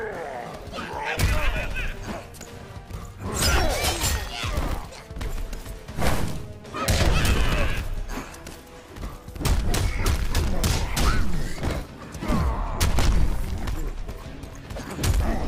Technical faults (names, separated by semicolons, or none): none